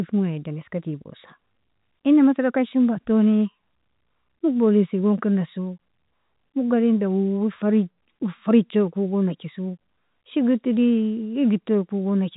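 No faults to report: the speech arrives through ordinary G.711 telephone coding, band-limited with nothing above about 3.8 kHz and only a faint level-following quantisation hiss beneath it.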